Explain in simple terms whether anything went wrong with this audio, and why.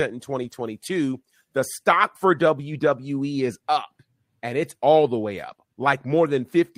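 Around 0.43 to 0.53 s the speech briefly turns rough and noisy, like a blurred patch, yet it never drops out. This is a lost packet rebuilt from error correction. A few pieces of the audio stream went missing in transit, but each following piece carried a small, lower-quality backup of the one before it. The player filled the hole with those backups, so the sound continues without a gap, just coarser for that instant.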